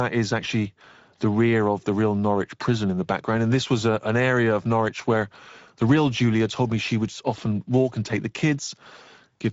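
Speex codec damage runs throughout: coarse CELP coding, which fits a rate near 17 kbps, leaves the speech plainly hoarse and noisy, with nothing above 7.7 kHz.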